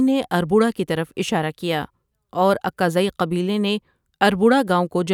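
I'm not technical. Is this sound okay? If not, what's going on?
Yes, nothing wrong can be heard in this speech.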